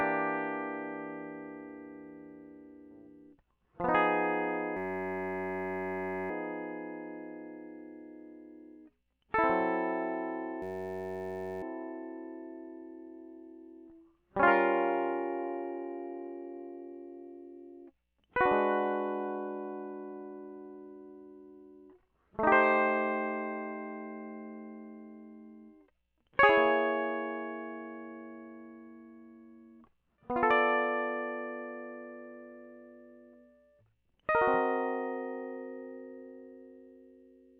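This music clip has a system hang loop, twice: the computer or its audio driver stalled while the sound hardware kept replaying the same ring buffer. From 4.77 to 6.30 s and again from 10.62 to 11.63 s, one 10.67 ms slice repeats exactly, which fits a 512-sample buffer. Because the slice is so short, the music gives way to a steady buzz at 93.8 Hz, and it resumes afterward with essentially nothing skipped.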